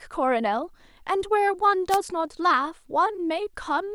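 At 1.89 s the wireless microphone's FM radio signal fades, causing a wireless microphone noise hit: receiver noise surges into a brief static swish over the speech until 1.98 s.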